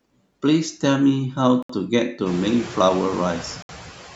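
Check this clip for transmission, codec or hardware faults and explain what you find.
Two kinds of fault are present in this speech: noise suppressor artifacts throughout, and two short dropouts that most likely come from a Bluetooth stall.

The noise suppressor artifacts run through the whole clip. The suppressor estimates which frequency bands hold steady noise and pulls them down frame by frame, here by about 9 dB. The background dips in the gaps and swells back under speech, and the room noise rises sharply, by about 21 dB, a little past halfway. On a spectrogram the noise floor looks blotchy and pumping, with isolated flickering specks in the pauses. Content above 8 kHz is absent, from the call's microphone processing.

The sound cuts to silence from 1.63 to 1.70 s (69 ms) and again from 3.62 to 3.69 s (67 ms), then resumes. The likely cause is a Bluetooth stall: interference delayed packets, the headphone buffer emptied, and playback halted until the retransmissions arrived. 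Each dropout is heard as a brief hard gap. On the waveform it is a flat near-silent segment with abrupt edges. On a spectrogram it is a clean vertical blank band across all frequencies.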